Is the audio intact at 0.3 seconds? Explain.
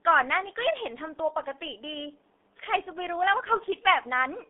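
No. The G.723.1 codec affects 0.3 s and the whole speech clip: the band is cut to 300 Hz–3.6 kHz and coarse, slowly updated coding, consistent with about 6.3 kbit/s, leaves speech muffled and hoarse, with smeared consonants.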